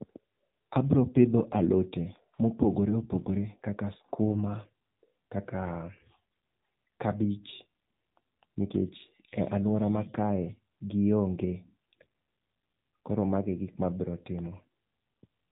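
Speech, and the whole clip has clearly been through an AMR narrowband mobile codec, the old 2G/3G phone-call codec. Everything stops at about 3.8 kHz, so there's no air or sibilance on top, and the voice has that buzzy, synthetic edge you get when a vocal-tract model, fed only a few pulses per subframe, rebuilds the speech. The damage is plainly audible, which fits a low mode, around 7.4 kbps.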